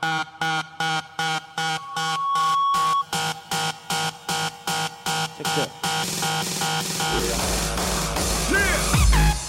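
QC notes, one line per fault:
1.59–3.05 s, loudspeaker feedback squeal: a single tone near 1.1 kHz swells out of the audio over roughly 0.7 s and settles at around 5 dB above the rest of the sound until it cuts off. The microphone is hearing its own loudspeaker, and at that one frequency the loop gain exceeds unity, so the tone feeds itself. A steady interfering tone would be constant from its onset, but this one grows on its own before levelling off.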